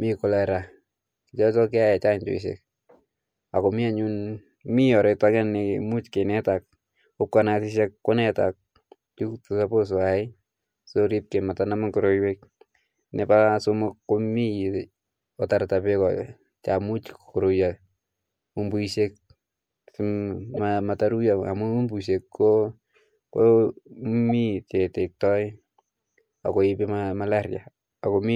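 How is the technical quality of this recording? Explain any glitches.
There is one glitch, a short corrupt frame decoded at 20.54 to 20.59 s. For about 50 ms, around three damaged frames, the decoder played bits that had been flipped. Misread gains put energy at the wrong frequencies, so an error burst peaks near -15 dBFS. Lost-packet concealment would instead fill the gap with muted or smeared sound. This burst is new and wrong.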